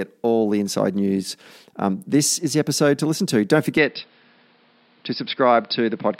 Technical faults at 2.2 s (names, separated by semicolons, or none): none